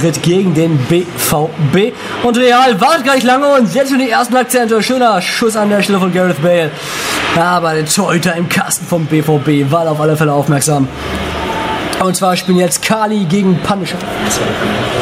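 The recording shows gain pumping from start to finish, with the level swinging by something like 25 dB. The likely cause is input gain set far too high, with a fast limiter or compressor clamping down on each peak. Unlike a noise gate, the background never cuts to silence, and loud and soft passages end up squashed close together.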